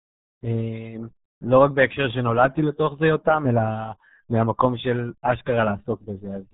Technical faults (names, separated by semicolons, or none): RealAudio 14.4 codec